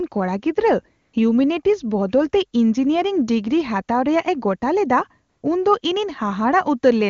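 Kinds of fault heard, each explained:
AMR comfort noise: The phone treated brief pauses as silence and stopped sending speech frames, so the receiver played synthetic noise in their place, at 1.01 to 1.13 s just before "ᱦᱤᱣᱢᱮᱱᱤᱴᱤᱠᱥ ᱵᱚᱫᱚᱞᱛᱮ" and at 5.29 to 5.43 s. On a spectrogram these gaps show as flat, smooth noise with abrupt edges. The waveform shows a steady low-level band.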